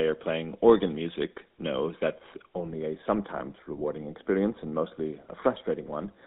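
From start to end, the speech carries the GSM full-rate codec sound. The coder models the vocal tract and drives it with a thinned, regularly spaced pulse excitation. Damage is plainly audible. The voice turns buzzy and gravelly. The band is squeezed to roughly 200 Hz to 3.7 kHz, so it sounds thin and boxy. The grain fits the 13 kbps full-rate coder of early mobile phones.

At 2.72 s, channel delay (comb filtering) begins and runs to the end. One channel arrives a fraction of a millisecond late. The two channels are then summed to mono. Shared content cancels at evenly spaced frequencies, with the first notch around 3 kHz. The top of the already narrow band loses energy. The speech turns hollow, phasey and duller from that point on.

Between 3.38 and 3.41 s there are lost GSM frames. The gap is about 20 ms, which fits a single dropped frame. The decoder fills it by repeating the last good frame's settings. 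The result is a brief rough, metallic ring rather than a clean gap. The loss is short, so the sound never fades to silence. It flickers inside the hollow, comb-filtered passage.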